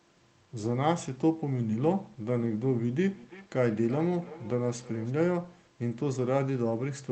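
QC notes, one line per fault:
3.08–5.14 s: feedback echo between two devices. The speech comes back about every third of a second, thinner and more ringing each pass, peaking about 17 dB below the direct sound. A second device is replaying the call into a microphone whose echo canceller doesn't know about that playback.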